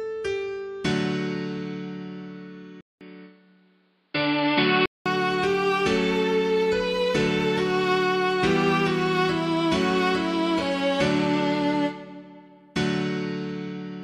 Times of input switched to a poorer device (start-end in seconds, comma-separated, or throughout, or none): 2.81-5.06